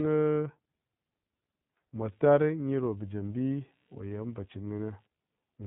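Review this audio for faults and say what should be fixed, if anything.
The whole clip has passed through the iLBC codec. Nothing above 3.8 kHz survives, so the speech sounds narrowband and muffled. The damage is plainly audible: the voice takes on a rough, synthetic edge. iLBC codes each 20 ms frame's excitation on its own, without drawing on the previous frame. The character fits the 15.2 kbps mode. To prevent it, record or transmit with a wideband codec, or keep an uncompressed copy.

Computer activity noise starts at 1.98 s and runs to the end. It is a faint buzz pulsing at around 70 Hz, sitting far below the speech. It does not follow the talker. It follows the machine. Changing load on the processor, graphics card or mouse shifts the shared ground of the audio circuit, and that shift leaks into the signal. To prevent it, use an external USB or isolated audio interface, or break the ground loop.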